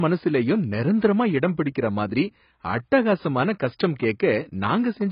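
From start to finish the speech has nothing above 5.2 kHz, and the damage is heavy. Sibilants turn fizzy and smeared, vowels warble, and the overall tone is dull. This is likely AAC compression, with an AAC-LC encoder short of bits. It has lowered its cut-off and left gaps in the spectrum or filled bands with substitute noise. That pattern fits a very low bitrate, on the order of 16 kbps.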